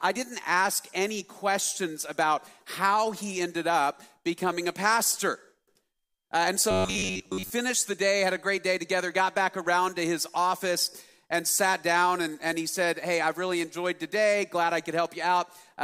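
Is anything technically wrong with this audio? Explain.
Yes. From 6.71 to 7.51 s, robotic sound from repeated short buffers turns the audio into a rigid, metallic buzz at 93.8 Hz. Most of it is likely replaced by loops of the last 10.7 ms, fixing that pitch. Unlike a stutter, no recognisable chunk audibly repeats.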